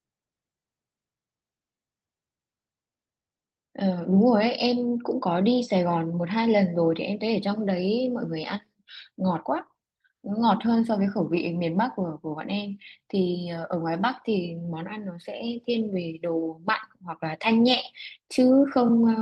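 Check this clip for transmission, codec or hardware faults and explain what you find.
No faults turn up anywhere in this speech clip.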